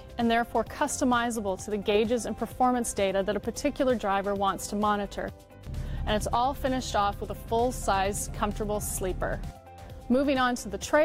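There are no technical faults to describe in this audio.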